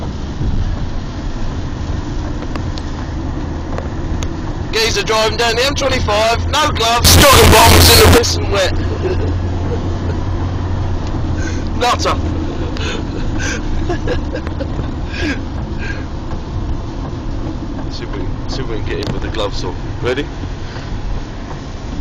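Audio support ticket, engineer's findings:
Float read as integer, 7.05–8.18 s. Burst of very loud, harsh, near-square waveform at a near-fixed high level. Background noise jumps to the level of the main sound. Likely cause: 32-bit float samples read as 32-bit integers, so sign and exponent bits set amplitude.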